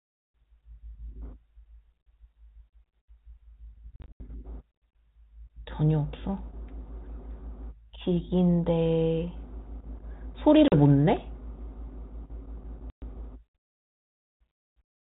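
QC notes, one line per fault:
3.96–4.30 s, 10.68–10.73 s and 12.90–13.20 s, packet loss on an ADPCM call: packets on the 32 kbit/s G.726 link dropped, about 160 ms scattered over 240 ms (longest gap 80 ms), then 40 ms, then 120 ms. Each gap is filled with hard-edged silence. The decoder's adaptive predictor and step size lose track of the sender's, so speech resumes slightly distorted before settling within tens of milliseconds.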